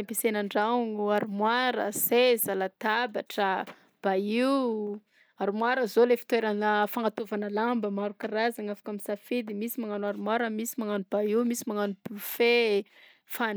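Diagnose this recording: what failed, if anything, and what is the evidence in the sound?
Nothing in this speech recording points to a failure at any stage of the chain. No dropout, click, distortion, level jump or other disturbance stands out anywhere along it.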